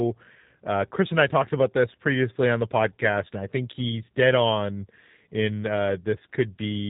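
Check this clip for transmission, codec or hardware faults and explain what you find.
The speech carries G.729 codec damage from start to finish, and it is plainly audible. Nothing passes above about 3.8 kHz, and the voice has the slightly rough, synthetic grain of a speech coder that rebuilds each 10 ms frame from a vocal tract filter, a pitch predictor and a few excitation pulses. That points to an 8 kbit/s G.729A link. Simple narrowband filtering would leave the band limit but keep the voice smooth, so the grain marks this as a coder.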